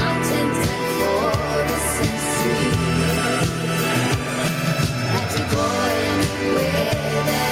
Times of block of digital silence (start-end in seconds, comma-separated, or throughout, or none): none